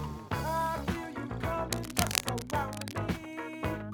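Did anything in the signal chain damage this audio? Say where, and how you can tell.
Yes. From 1.72 s to 3.02 s there is cable scratch noise, which places the damage in the analogue wiring: a worn cable, connector or control being moved likely changed its contact resistance rapidly, injecting dense, irregular bursts of scratching only a few decibels below the sound itself. On a spectrogram this shows as ragged broadband vertical streaks across that span; on the waveform, as jagged, uneven spikes riding on top of the signal.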